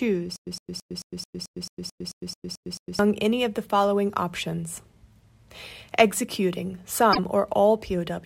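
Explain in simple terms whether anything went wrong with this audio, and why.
Yes, two things went wrong. From 0.36 to 2.99 s there is a stutter with silent gaps. The likely cause is that the player or stream kept stalling, and each time it tried again it replayed the last scrap of sound it had before running dry. You hear the same 0.11-second fragment come back 12 times, once every 0.22 seconds, with 0.11 seconds of dead silence between repeats. Whatever should have played during that stretch is missing, and normal speech resumes with "any of the following".

From 7.09 to 7.19 s there is damaged data in a compressed stream. A small piece of the compressed file or stream was corrupted, so the decoder could not read that part correctly and had to hunt for the next point where it could pick up again. For that tenth of a second you hear a short disturbance, something like a chirp, squawk, click or brief hole, instead of the audio that belonged there.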